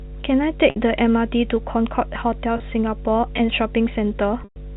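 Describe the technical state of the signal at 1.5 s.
Mains hum runs throughout, including 1.5 s: power-line coupling adds a steady 50 Hz tone roughly 15 dB below the speech, fixed in pitch, unlike rumble.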